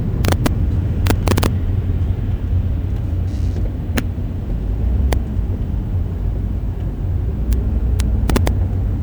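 Integer overflow cracks the sound at 0.25–0.47 s, 1.07–1.46 s, 3.98 s, 5.13 s, 7.53 s and 8.00–8.48 s. Peaks up to about 3 dB over full scale wrap to the opposite sign, giving violent snaps. On a waveform these show as sudden rail-to-rail jumps, and on a spectrogram as full-band vertical streaks.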